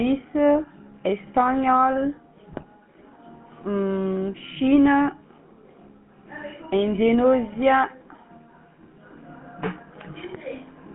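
From start to finish the speech has a buzzy, gravelly roughness, plainly audible, with the top end cut off and the low end thinned, so it sits in a narrow telephone band of roughly 150 Hz to 3.4 kHz. This is the GSM full-rate codec. It rebuilds speech from a vocal-tract filter driven by a coarse pulse train, discarding much of the excitation detail, and that simplified excitation is what grates. The sound fits the 13 kbps full-rate mode.

From 2.52 to 2.65 s the speech breaks into squawking and gargling pops, with the level and tone lurching unpredictably for a fraction of a second. These are GSM bit errors. Corrupted bits reached the decoder, so the filter, pitch and gain values for those frames came out wrong, warping the spectrum and jolting the level. The damage spans about six 20 ms frames and points to a heavy error rate of around 5 percent.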